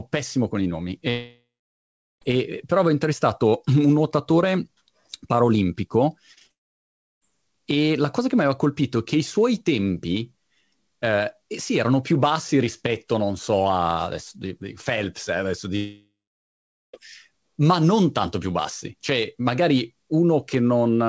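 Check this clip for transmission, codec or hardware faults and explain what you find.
Yes, there are transmission faults: three long network dropouts and one short burst of repeated packet loss. The speech is band-limited with nothing above 8 kHz, which fits a G.722 call path at around 64 kbps.

Long network dropouts occur at 1.10–2.23 s, 6.52–7.23 s and 15.76–16.95 s. The first starts after "pessimo con i nomi" and resumes at "però avevo intervistato". The second follows "un nuotatore parolimpico" and resumes at "e la cosa che". The third comes after "eh adesso". The likely cause is a stall in packet delivery. The receiver extends the last sound into a fading buzz, then goes silent for about 0.77 s, 0.68 s and 0.82 s respectively. Roughly 1.1 s, 0.7 s and 1.2 s of audio are lost outright.

Repeated packet loss (robotic sound) runs from 6.33 to 6.52 s, leading straight into the second dropout. 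Four short gaps, the longest 31 ms, are each patched by continuing the preceding waveform, so about 46% of that stretch is concealment rather than real signal. The result is a brief choppy stutter with pieces missing just before the audio cuts out.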